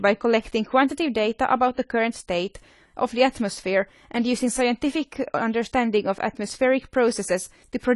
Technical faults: AAC compression

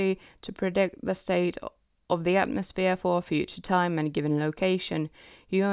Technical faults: none

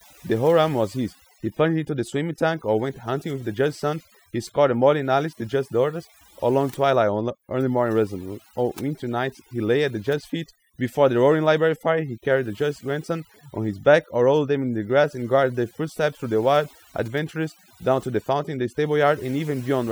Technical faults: overdone noise removal

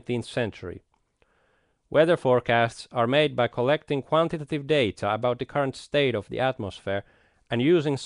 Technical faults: Nellymoser compression

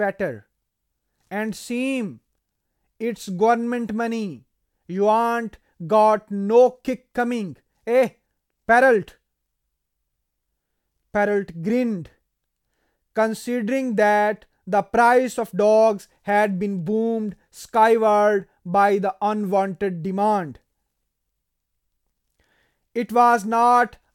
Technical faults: none

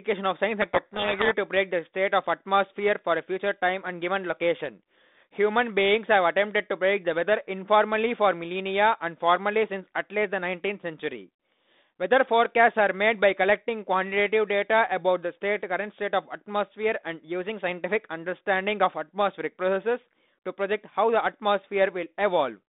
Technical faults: codec payload misread

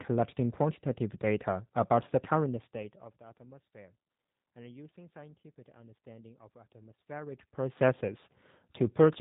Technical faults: G.729 codec

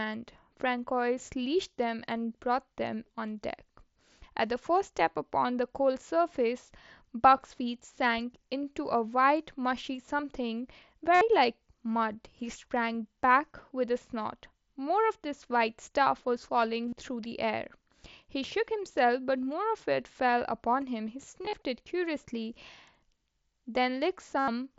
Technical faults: concealed Bluetooth headset packet loss

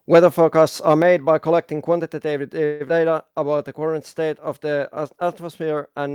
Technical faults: microphone overload; microphone volume stepped down; call audio freeze; skip ahead; jitter buffer slow-down

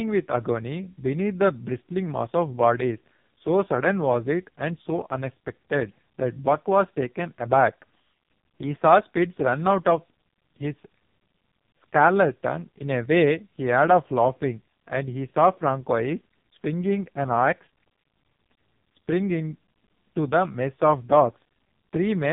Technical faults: AMR narrowband mobile codec

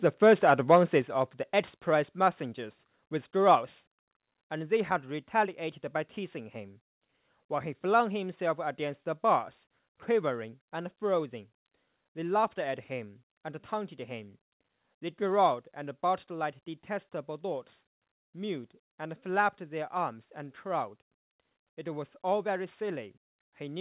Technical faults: microphone overload; microphone volume stepped down; microphone volume stepped up

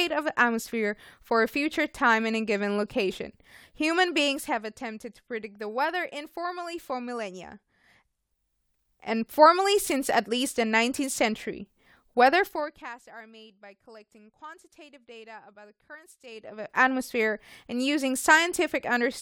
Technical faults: zipper noise

